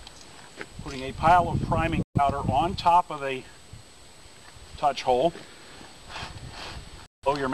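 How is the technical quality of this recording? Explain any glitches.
The recording is marred by two digital broadcast dropouts, at 2.03 to 2.21 s and at 7.06 to 7.28 s. Each time the receiver stopped getting valid frames and muted until clean data arrived. The first hole runs about 0.13 s, roughly three frames. The second, around 0.17 s, sounds like a scattered patch over about a quarter second, which fits several bad frames. The sound cuts to silence and resumes mid-stream, with that stretch simply gone.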